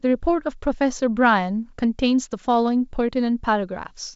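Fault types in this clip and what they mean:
No faults present; the speech is carried on a G.722 wideband telephone path at 64 kbit/s, with codec damage faint at most.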